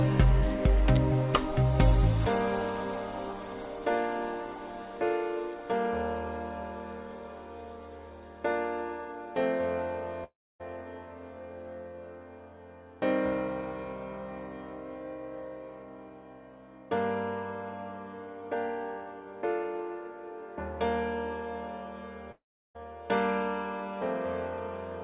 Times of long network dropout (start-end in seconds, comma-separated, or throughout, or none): 10.24-10.62, 22.31-22.78